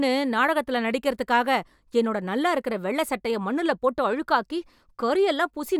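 No faults detected anywhere in the recording.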